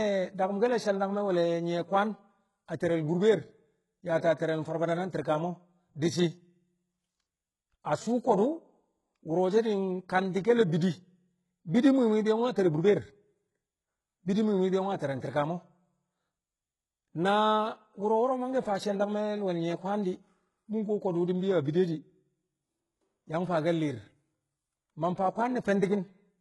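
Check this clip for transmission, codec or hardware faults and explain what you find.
One codec fault runs through the whole speech clip. Throughout, the treble is bright but false, with gritty, lispy s sounds and nothing above 11.5 kHz. The likely cause is heavy HE-AAC compression, fitting roughly 12 kbps. Spectral band replication copies lower bands upward, so harmonics misalign.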